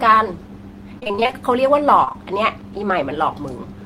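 From 0.99 to 1.34 s, repeated packet loss gives choppy, robotic speech: holes up to 25 ms keep being patched with continued sound, nearly half the stretch. Short concealed packet loss at 2.04, 2.09 and 2.12 s brings three adjacent 20 ms gaps filled and blended back, heard as one brief smear rather than sustained robotic chopping.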